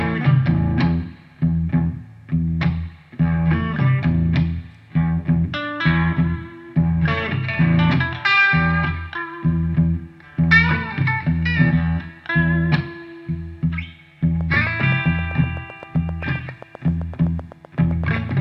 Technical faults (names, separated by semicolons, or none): train of clicks